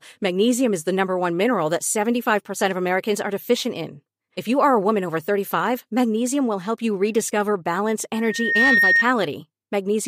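After "rediscover balance", from 8.14 to 9.05 s, loudspeaker feedback squeal: a 1.8 kHz tone swells over about half a second to roughly 5 dB above the speech.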